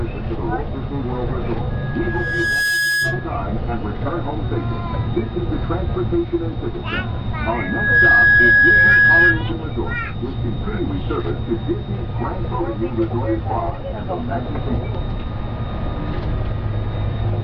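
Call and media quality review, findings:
Loudspeaker feedback squeal, 1.70–3.35 s and 7.52–9.43 s: mic–speaker loop gain exceeds one at 1.7 kHz. Tone swells over about 1 s, then half a second, reaching about 5 dB, then 10 dB, above the signal.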